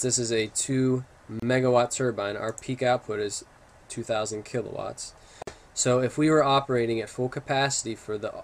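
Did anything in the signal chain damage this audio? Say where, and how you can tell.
Yes, there are two gaps at joins of encoded pieces, from the codec stage. Silence cuts into continuous sound at 1.40–1.42 s (about 29 ms) and at 5.42–5.47 s (49 ms), four seconds apart. The sound then resumes where it stopped. Each piece was encoded separately and joined untrimmed, keeping the encoder's start delay and last-frame padding. The waveform shows flat dropouts with smeared edges, and a spectrogram shows thin blank vertical bands.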